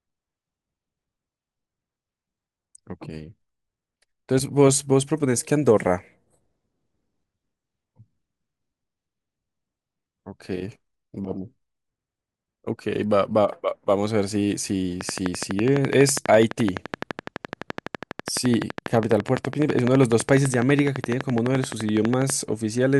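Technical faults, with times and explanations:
15.01–22.31 s: train of clicks, around a hundred evenly spaced ticks at 11.9 per second, well above the speech, likely interference; their steady rate distinguishes them from random crackle.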